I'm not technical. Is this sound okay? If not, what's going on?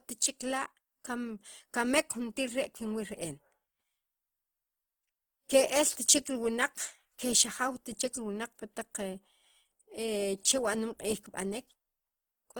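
No. From start to finish the speech has a rough, grainy edge, as if a fine layer of hiss were woven into it, and steady sounds lose their smooth, clean quality. It never drops out or goes muffled; the full range of high sounds is still there. This is most likely Opus compression: the file was squeezed very small, so the encoder kept the overall shape of the sound but filled in missing detail with noise.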